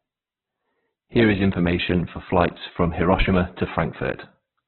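Speech that's band-limited with nothing above about 4.2 kHz throughout, and grainy and rough. Sounds like Opus compression, likely at a very low bitrate, around 8 kbps.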